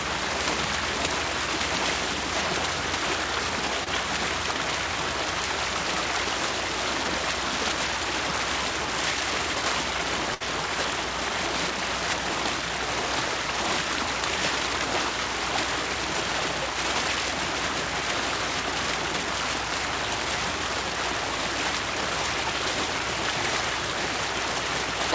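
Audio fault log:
3.84–3.88 s, short concealed packet loss: About 20 ms of audio arrived too late to decode. The receiver filled 22 ms by carrying the preceding sound forward, from its pitch if tonal, as shaped noise if not, then blended back. It heard as a brief smear or wobble.
10.34–10.42 s, burst of packet loss: A run of packets was lost or late, leaving a 61 ms gap. The receiver continued the last sound and faded it, giving a held buzz if tonal, a fading hiss otherwise. Playback then resumes, with 60 ms of audio skipped.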